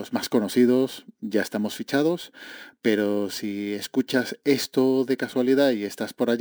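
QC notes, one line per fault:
Throughout: imaging from sample-and-hold upsampling. The speech was raised from 24 kHz to 44.1 kHz by repeating samples with no smoothing filter, so a mirrored copy of the spectrum sits between 12 kHz and 24 kHz at about -25 dB, heard as metallic fizz tracking the voice. A spectrogram shows inverted harmonics mirrored above 12 kHz, and the waveform shows small stair-steps.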